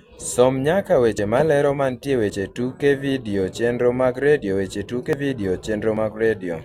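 At 1.18, 2.30, 5.13 and 5.97 s the speech jumps forward, losing about 50, 20, 50 and 20 ms, with no silent gap, unlike a dropout. This is likely a dropped buffer (overrun), where unread input was overwritten.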